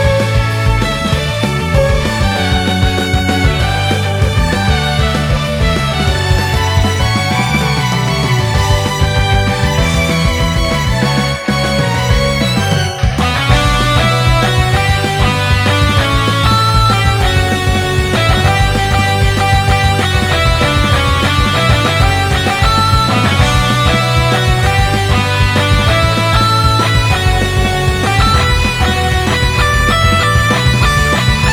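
Nothing technically wrong can be heard anywhere in this audio. There is no moment to mark and no cause to explain.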